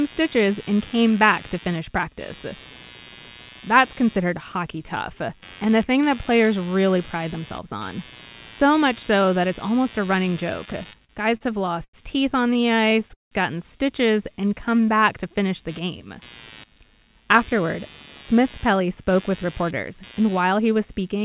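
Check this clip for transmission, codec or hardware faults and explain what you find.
Four kinds of fault are audible in this speech clip, which has been carried over a narrowband call path with nothing above 4 kHz, consistent with G.711 mu-law at 64 kbps.

Computer activity noise runs throughout as a buzz pulsing at roughly 100 Hz, sitting roughly 25 dB below the speech. Processor, graphics or mouse load shifts the shared ground of the audio circuit, so the buzz follows the machine's activity, not the speech.

Repeated stalls (stutter) occur from 10.66 to 11.95 s, right after "it's almost a running", and again from 12.53 to 13.33 s, after "teeth on". The first stretch breaks into about ten brief holds, the longest 91 ms. The second has eight, the longest 178 ms. Late packets emptied the jitter buffer each time, and the receiver extended the last sound. Nothing is lost, but the speech drags and judders.

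Jitter buffer slow-down affects 14.32 to 15.18 s, just before "to finish the game". The receiver built up reserve by repeating pitch periods, adding 103 ms. The speech plays at 89% speed with unchanged pitch and sounds drawn out.

Jitter buffer speed-up runs from 17.0 s to 21.24 s. The buffer held surplus audio, so the receiver trimmed short pitch-period pieces, about a fifth of a second in total. The speech plays at 105% speed at the same pitch and sounds hurried.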